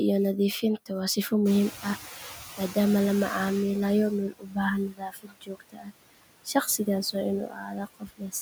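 Noise suppressor artifacts run through the whole clip: the suppressor pulls steady background down by about 18 dB frame by frame, so the residue sinks between phrases and swells under the speech.

At about 1.5 s the room noise jumps by about 18 dB, and from 1.45 to 4.09 s the noise suppressor is catching up. Its noise estimate lags the change, so the louder noise passes with less reduction before sinking over roughly 2.6 s to about 13 dB of cut.

Speech cut by the noise suppressor follows, as the processing mistakes parts of the speech for noise. Dips occur at 4.29–4.58 s (about 19 dB), 4.88–5.93 s (about 22 dB, around a second affected), 6.45–6.87 s (about 13 dB, brief) and 7.47–8.34 s (about 20 dB). Those passages sound swallowed and faint.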